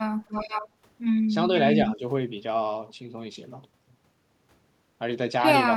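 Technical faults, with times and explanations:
0.28–0.68 s, echo leak: The far end's echo canceller likely failed to remove what its microphone caught from the loudspeaker, so the speech returns as a copy delayed by 475 ms, sitting roughly 10 dB under the direct voice as a faint, trailing double.
1.97–2.02 s, speech suppressed in double talk: With both sides talking at once, the echo canceller likely mistook the talker's own voice for loudspeaker echo and turned it down, giving a brief dip of a few decibels lasting about 50 ms.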